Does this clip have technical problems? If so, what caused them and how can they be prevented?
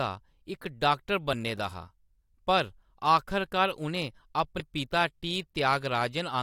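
Yes. The speech has two instances of compressed frames skipped. At 1.32 s, between "इक डाक्टर" and "दा हा", about one frame (roughly 20 ms) is missing. At 4.59 s, about four frames (roughly 100 ms) are missing. The decoder never played those frames, either because they were absent or because it rejected them as damaged, so the audio jumps forward in whole 21.3 ms frames. Prevent it by sending the stream over a reliable path with error checking and by verifying file integrity after encoding and transfer.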